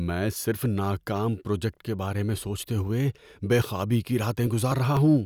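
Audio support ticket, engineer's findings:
Periodic USB or driver dropouts, 4.22 to 4.97 s, just after "ہوئے بے خوابی کی". Regular ticks in the speech, spaced 0.25 s apart, about four in all. Each is a gap of roughly 1 ms where audio is skipped, not silenced. Probable component: USB bus or audio driver, stalled at a fixed interval by a background task. Ticks occur only under signal.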